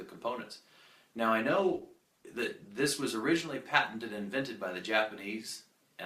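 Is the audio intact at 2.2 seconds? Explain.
No. From 1.4 to 2.83 s there is a call bitrate drop: the bandwidth estimate fell and the encoder coded more coarsely, with a quality that fits a fall from about 64 to 16 kbps. The sound turns rough and muffled but keeps flowing, with no gaps or glitches of the kind packet loss would leave.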